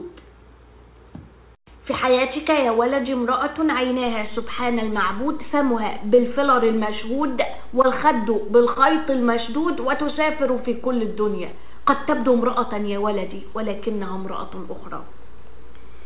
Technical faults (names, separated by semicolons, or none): DC step; short concealed packet loss